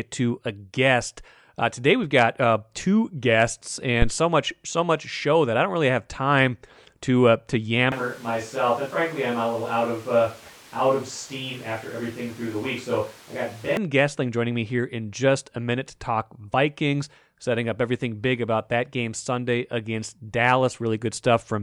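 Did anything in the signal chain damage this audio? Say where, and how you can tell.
Yes. A phantom power thump hits the analogue input stage at 4.02 to 4.14 s, between "got uh two guests" and "much so much show". Supply voltage switched on or off on a live input steps through the coupling capacitors, giving a deep low thump that dies away within about 26 ms.

A switch to a distant microphone runs from 7.92 to 13.77 s, right after "time to uh to". The speech turns roomy and thin, drops about 5 dB, and room noise rises to about 25 dB below the speech. The likely cause is the close microphone dropping out, leaving a farther pickup such as a camera microphone carrying the recording until it returns abruptly.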